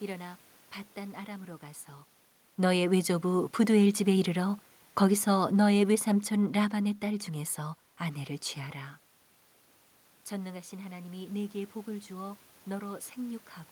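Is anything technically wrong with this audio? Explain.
Yes. The automatic gain control misbehaves three times, twice rising and once falling.

Automatic gain rising: From 2.56 to 3.36 s, the control judges the input too quiet and raises its gain by about 3 dB. From 10.4 s to the end, the input drops by about 12 dB and the control climbs after it again. Both times the speech and the room noise behind it swell together, so the background rises along with the voice.

Automatic gain falling: From 4.96 to 6.95 s, the control judges the input too loud and lowers its gain by about 4 dB over roughly two seconds. The speech starts out loud and then sinks. The room noise sinks with it, so the quieter background gives the drop away as gain rather than the talker, whose own moves near 2 s and 8.5 s are heard as distance.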